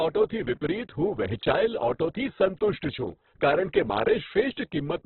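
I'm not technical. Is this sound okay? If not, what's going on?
No. From start to finish, the speech sounds dull and boxed-in, like an old phone line, with a rough, grainy, noisy edge on the voice. This is most likely heavy Opus compression. To save space, the encoder throws away everything above about 4.4 kHz, which removes the crispness, and it patches gaps in what remains with noise-like filler. That filler is what makes the sound coarse rather than clean.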